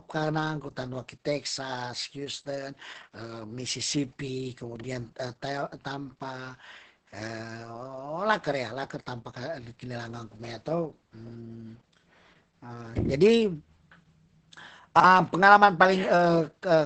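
From start to finish the speech carries heavy Opus voice compression. It sounds muffled and hoarse, with a slightly robotic edge, which fits the SILK linear-prediction coder working at a very low rate, probably around 10 kbps. The coder spends few bits on the excitation, so consonants lose detail and voicing turns rough. On a spectrogram, energy stops abruptly at about 8.7 kHz and the harmonics look smeared and blocky rather than finely striated.

At 4.76 s and again at 14.96 s, the chunks play out of order for about 80 ms each time. Two neighbouring 40 ms pieces are swapped, so one piece arrives a chunk late and plays after the piece that should follow it. Nothing is missing, but the sound jumps back and forth and comes out as a brief garbled stutter. The waveform shows three hard discontinuities inside each span, and the spectrogram shows matching vertical broadband lines where the joins fall.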